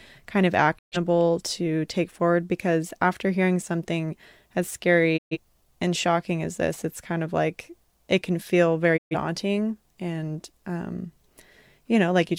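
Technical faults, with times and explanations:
0.77–0.97 s, 5.16–5.37 s, 8.96–9.15 s: digital broadcast dropout. The speech fades out over about 20 ms and goes silent. About 128 ms of programme is lost each time, which fits a few failed frames. The receiver muted until clean frames returned.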